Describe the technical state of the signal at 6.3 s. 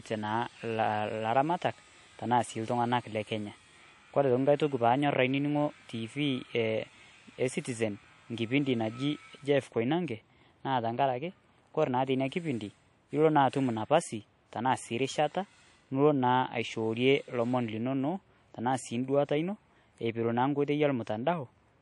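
At 6.3 s the speech carries a fault that runs through the whole clip. It is likely transcoding between lossy codecs. The sound points to a WMA stage at around 64 kbit/s, then an MP3 stage near 48 kbit/s. The second encoder spends its bits on the first one's artefacts and adds its own. Both sets are heard together. Nothing remains above 11.1 kHz, so the top end sounds dull.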